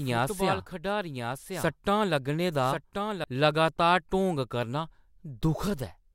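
From the start until 3.24 s, a second, somewhat quieter copy of the speech trails about a second behind, then cuts off abruptly: a doubled audio track, likely from a slower capture path.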